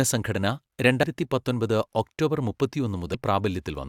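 Speech with two brief bursts of damaged data in the compressed stream, at 1.02 s and 3.14 s. Each is a short chirp or blip where the decoder misreads corrupted frames and loses sync.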